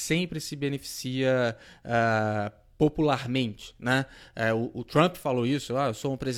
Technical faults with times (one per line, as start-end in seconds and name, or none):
none